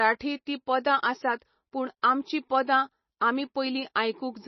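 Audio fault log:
Throughout: MP3 compression, heavy. The speech has no content above about 5.9 kHz, so the top of s sounds and breath noise is missing and the sound is dull. The remaining band is watery and swirly, because weak frequency lines switch on and off from frame to frame. Consonant attacks are smeared. The likely cause is an MP3 encoder short of bits, cutting the treble at a fixed frequency, and the damage fits a rate near 24 kbps.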